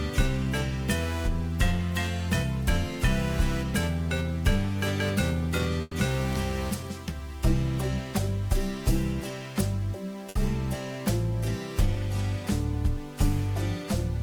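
At 5.81 to 5.94 s a call audio freeze holds the last sound as a fading buzz or hiss for about 110 ms, likely a jitter buffer running dry while packets were delayed. At 10.29 s a short stall from a late packet stretches the sound for 60 ms, then resumes exactly where it stopped, adding delay without losing anything.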